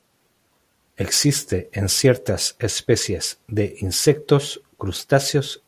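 No technical faults are audible at any point in the speech recording; nothing to report.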